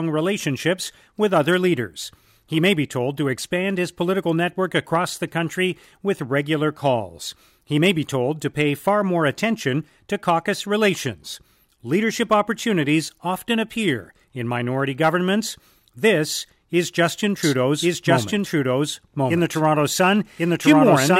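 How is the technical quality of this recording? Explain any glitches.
The recording has one clear glitch near the end. From 17.43 s to the end, a doubled audio track appears: a second full-band copy of the speech, about as loud as the original, runs roughly a second behind. It starts abruptly and has no decay or room colour, likely from the same signal being captured again through a slower path.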